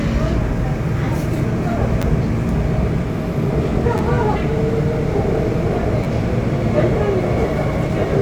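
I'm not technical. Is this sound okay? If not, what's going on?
No, there are two kinds of fault, each happening three times.

The first is a repeated buffer. The playback device ran short of fresh audio and replayed its last tiny chunk, about 10.7 ms long (which fits a 512-sample buffer), two extra times. Because the chunk is so short, you hear a quick click or brief buzz rather than a clear stutter, at 2.02 to 2.04 s, 3.98 to 4.00 s and 6.04 to 6.06 s. Nothing is lost; the sound just catches for a moment.

The second is compressed frames skipped. The audio is stored in small compressed blocks of 46.4 ms each, and some were missing or rejected as damaged, so playback jumps forward. At 3.09 to 3.15 s, about 0.4 seconds of sound is skipped; at 4.32 to 4.38 s and 7.82 to 7.87 s, roughly a fifth of a second each.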